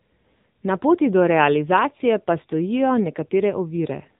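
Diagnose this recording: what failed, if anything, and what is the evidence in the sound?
The failure is at the codec stage: the whole recording has passed through the AMR narrowband mobile codec. From start to finish nothing above about 3.8 kHz survives, so sibilants and breath lose their top end. The speech has a plainly audible buzzy, synthetic edge, because it is rebuilt from a vocal-tract model driven by a pitch predictor and a few pulses in each 5 ms. That degree of damage fits AMR-NB at around 7.95 kbps.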